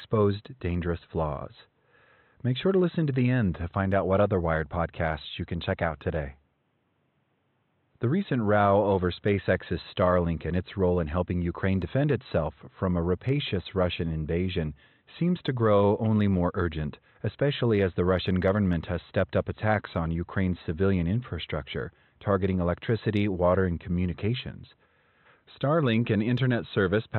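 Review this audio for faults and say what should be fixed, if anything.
No faults; nothing to fix.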